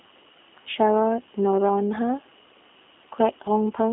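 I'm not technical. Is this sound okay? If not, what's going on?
No. Throughout, the speech has passed through the G.729 codec, a low-rate phone-call codec that rebuilds speech from a simplified model of the voice. Everything above about 3.7 kHz is gone, leaving a narrow, muffled phone-line sound that is plainly rough and slightly synthetic.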